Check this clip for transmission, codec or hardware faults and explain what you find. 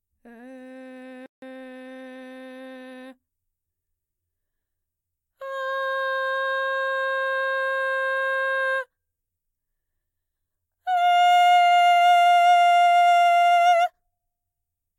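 One fault shows up. At 1.26 s there is a playback stall: the player likely ran out of data or was blocked, so the music falls silent for 161 ms until 1.42 s.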